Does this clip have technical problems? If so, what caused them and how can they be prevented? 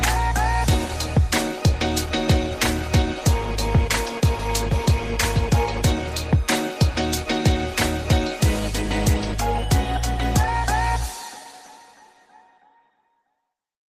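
No, nothing here points to a technical problem, so there's nothing to track down or guard against next time.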